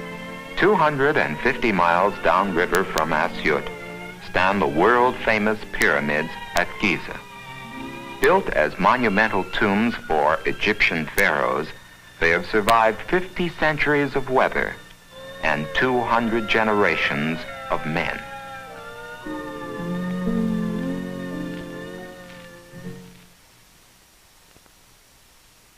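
Integer overflow cracks at 2.75–2.98, 5.82, 6.57, 8.24, 11.18 and 12.69 s: peaks barely over full scale, about 1 dB or less, wrap to the opposite sign. The waveform shows full-range vertical flips, and the spectrogram shows broadband vertical streaks, harsher than clipping.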